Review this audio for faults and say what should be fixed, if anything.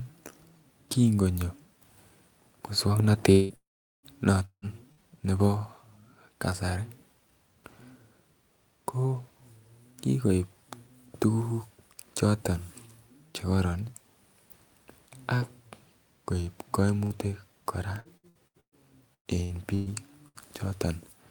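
A long network dropout, likely, occurs at 3.31–3.53 s, 3.55–4.06 s and 4.45–4.65 s: the last sound is stretched into a fading buzz, with about 0.4 s of silence in the middle gap.

A burst of packet loss drops about 60 ms at 4.92–5.12 s, 17.04–17.13 s and 20.28–20.38 s, where a brief held buzz or fading hiss replaces the lost audio.

Repeated packet loss (robotic sound) hits 18.00–18.75 s with five gaps and 19.14–19.89 s with four gaps, the longest around 0.12 s. Patching each hole leaves choppy speech with pieces missing.

To prevent these, stabilise the network path and add forward error correction with a deeper jitter buffer.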